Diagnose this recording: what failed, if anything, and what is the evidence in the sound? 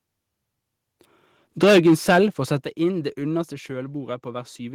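Microphone overload, at the converter stage, from 1.62 to 2.19 s. The loudest syllables there have a harsh, crackly edge because the peaks are hitting the converter's limit and getting flattened, with the signal trying to go about 9 dB past the limit and a sizeable chunk of samples, roughly one in seven, pinned at the ceiling. The likely cause is the mic input gain being set too hot for how loud the talker got.

Microphone volume stepped down, in the call processing, three times: at 1.64 s by about 2 dB, at 2.64 s by about 8 dB, and at 3.66 s by about 3 dB. Each one is an abrupt drop in level where the speech and the background fall together, with no fade. The first lands right inside the clipped stretch, so the likely cause is the call software's gain control reacting to that overload by nudging the device input volume down in steps.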